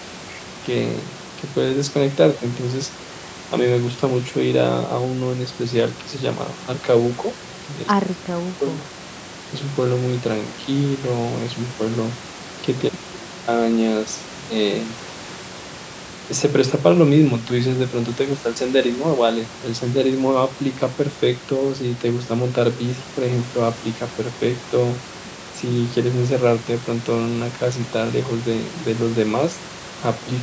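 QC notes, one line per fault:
Nothing stood out on listening to this speech clip, with the room noise sitting about 15 dB below the speech and nothing heard above 8 kHz from the call's microphone processing.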